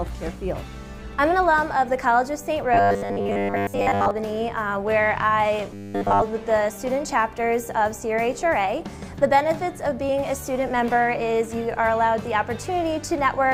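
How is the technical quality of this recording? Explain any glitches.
The recording has two glitches of the same kind: robotic sound from repeated short buffers, from 2.74 to 4.11 s and again from 5.74 to 6.23 s. The likely cause is audio arriving too seldom, so the playback fills the gaps by looping the most recent fragment while fresh material is dropped. The loop rate gives a steady 100 Hz buzz, which fits a repeated chunk of about 10 ms. In the first stretch, most of the sound is replaced by these repeats, leaving a rigid, metallic tone that only loosely tracks the original. In the second, the repetition takes over completely, so the buzz is continuous for that half second.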